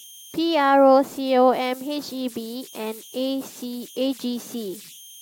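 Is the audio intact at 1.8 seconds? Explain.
No. At 1.8 seconds the speech carries converter idle tones, which run through the whole clip rather than starting or stopping there. A delta-sigma converter working without dither settles into repeating bit patterns whenever its input is small, and those patterns produce a tone, here somewhere around 3 kHz, sitting about 24 dB below the signal. It comes across as a whistle in the pauses and a grainy edge beneath quieter passages.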